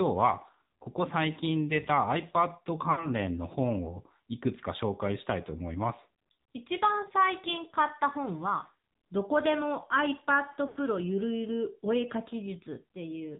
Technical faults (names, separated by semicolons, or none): AMR narrowband mobile codec; lost AMR speech frames